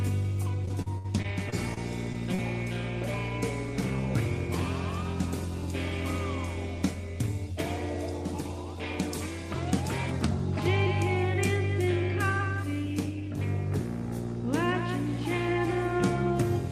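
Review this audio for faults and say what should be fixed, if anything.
From 0.65 to 2.40 s the audio breaks up with repeated packet loss, giving a choppy, robotic sound. About nine short holes in under two seconds, the longest about 61 ms, are each patched by stretching the preceding sound, so roughly 14% of that span is synthetic fill. Unlike a single dropout, which leaves one clean gap, the holes here recur in quick succession and are patched rather than left as silence. To prevent it, stabilise the network path and use a larger jitter buffer with forward error correction so lost packets can be recovered rather than concealed.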